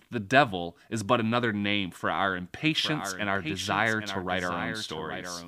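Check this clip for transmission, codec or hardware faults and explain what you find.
From 2.66 s to the end, a flat, quieter copy of the speech trails about 0.7 s behind: a doubled audio track, likely a second, slower capture path mixed in.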